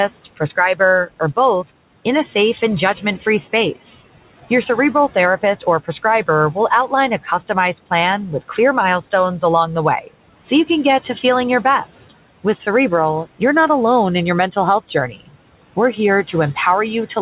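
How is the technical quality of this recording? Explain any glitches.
The recording has two noise suppressor faults, one running throughout and one hitting the speech at two moments. The room noise sits about 19 dB below the speech, and the call path's G.711 codec band-limits everything to 4 kHz.

Noise suppressor artifacts are present throughout. The suppressor pulls steady background down by about 17 dB, so the noise floor pumps between phrases. A spectrogram shows a flickering, mottled floor.

Speech cut by the noise suppressor occurs at 10.01–10.11 s and again between 14.88 and 15.36 s. Mistaking speech for noise, the suppressor dropped it by about 16 and 17 dB for roughly 100 ms and 200 ms. It sounds swallowed, and the waveform shows brief sagging notches.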